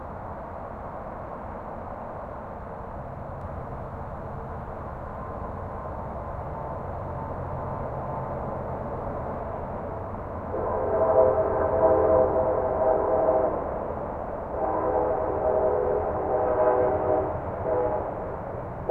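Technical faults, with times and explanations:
3.41 to 9.39 s, doubled audio track: a second full-band copy of the sounds runs about half a second behind the first, roughly 5 dB quieter, so every event is heard again like a flat, dry echo with no decay or room colour. The copy cuts in and drops out abruptly at those times, which likely points to the same audio being captured a second time through a slower path, or two out-of-step copies held together in an edit.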